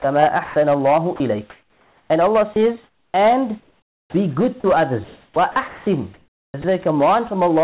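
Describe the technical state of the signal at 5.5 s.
At 5.5 s the signal is hard clipped, as it is across the whole clip. It is driven about 6 dB past full scale, so a small share of samples have their peaks cut flat. The flattened tops add harmonics that sound like crackle on louder speech.

The moment also falls inside a stretch from 1.16 s to 6.64 s where the sound is chopped by the voice detector, likely because the sender's detector kept toggling between sending and muting. About 2.5 s in total was replaced by comfort noise, so syllable edges drop out.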